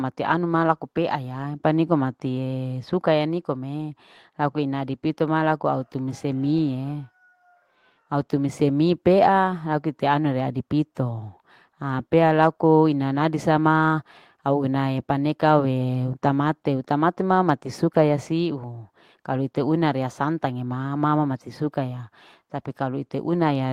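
No technical faults can be heard anywhere in the recording.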